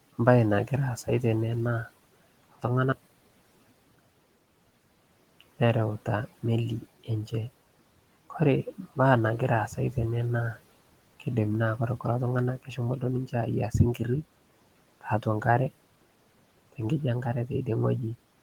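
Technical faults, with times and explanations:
2.92–4.59 s, one channel inverted: the speech suddenly collapses by about 26 dB, as if most of it has fallen away. That's what you get when one stereo side is likely flipped in polarity and the two are summed to mono. The centred speech cancels almost completely, leaving only the small differences between channels, so what's left is a faint trace until it snaps back.
12.58–12.78 s and 15.01–15.44 s, speech cut by the noise suppressor: in both spots the suppressor mistook bits of speech for background and pulled them down along with it, by about 14 dB in the first and about 17 dB in the second. Only short slices are hit, roughly a tenth of a second and a bit more, so you hear soft edges or endings swallowed rather than whole gaps. The room noise, sitting about 20 dB under the speech, is part of the recording.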